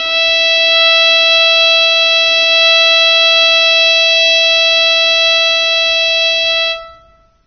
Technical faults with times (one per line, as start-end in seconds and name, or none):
0.00-7.46 AAC compression